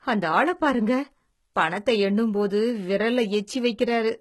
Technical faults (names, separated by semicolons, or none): HE-AAC compression